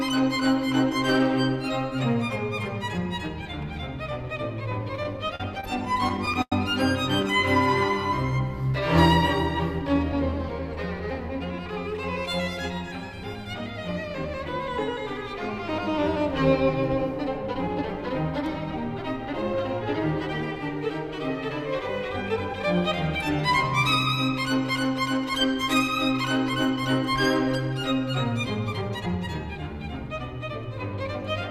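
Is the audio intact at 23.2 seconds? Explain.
Yes, the audio is intact at 23.2 seconds, with no audible fault at that moment.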